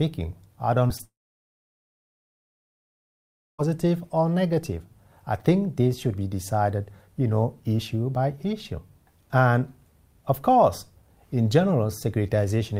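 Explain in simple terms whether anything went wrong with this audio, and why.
Something did go wrong, three times in quick succession near the start.

At 0.87 to 0.91 s and again at 0.97 to 1.01 s there are two tiny smears, each lasting only a few hundredths of a second, where the sound wobbles briefly instead of staying clean. This is short concealed packet loss: small pieces of the stream arrived too late to play, so the receiver bridged each gap by stretching the sound just before it, then slid back into the real audio.

Right after, from 1.05 s to 3.60 s, the sound briefly trails on, then falls away to near silence for about two and a half seconds before it returns, with nothing of that stretch ever played. The likely cause is a long network dropout: the connection stopped delivering audio altogether, the receiver could only fade out the last sound it had, and the missing stretch was lost for good.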